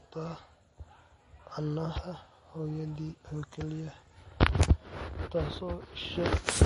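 Throughout, likely MP3 compression at a low bitrate, around 40 kbps, cuts the speech off above 10.6 kHz and leaves a plainly audible watery, swirling texture.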